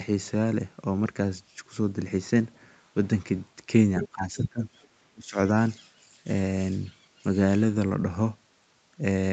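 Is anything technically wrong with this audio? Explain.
Yes. This speech clip has two echo-related faults, heard as the band-limited call audio, which stops near 8 kHz, passes through its Opus codec.

Other side's voice leaking through, 4.03 to 4.08 s and 4.82 to 4.88 s: brief scraps of a second voice appear under the talker. The first is fairly prominent, about 10 dB below the speech. The second is faint, about 35 dB down. The likely cause is the far side playing from a loudspeaker into the microphone, with the echo canceller failing to subtract all of it.

Speech suppressed in double talk, 4.03 to 4.62 s and 5.13 to 5.37 s: the talker's level sags, by about 15 dB in the first stretch and about 25 dB in the shorter second one, so the voice thins and partly drops away. This likely happened because both sides spoke together, and the echo canceller could not tell the local talker from the echo, so it turned everything down.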